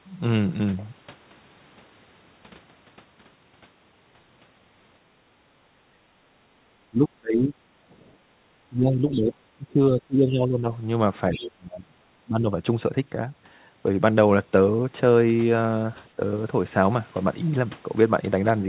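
From 5.43 to 6.63 s and again from 7.82 to 8.41 s, the echo canceller clamps the microphone while the far end plays, so the background is gated: room sound dips by about 12 dB, then about 9 dB, before returning. Speech suppressed in double talk follows at 6.91 to 7.54 s, 8.69 to 10.68 s, 11.33 to 12.48 s and briefly at 16.17 to 16.21 s, likely because the canceller mistook the talker for echo while both sides spoke. The speech sinks by around 25 to 30 dB in the longer spans and only slightly in the last one. The other side's voice leaks through at 9.11 to 9.21 s and 11.32 to 11.46 s as faint scraps, roughly 20 dB under the speech, which points to residual loudspeaker echo. The whole clip carries the narrowband sound of the call path, with nothing above 4 kHz, which fits G.711 A-law.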